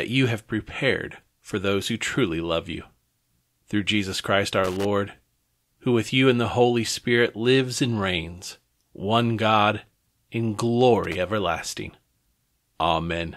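A speech recording with loose connector crackle in two irregular bursts, at 4.64 to 4.85 s and 11.04 to 11.15 s, where a worn contact intermittently chops the signal.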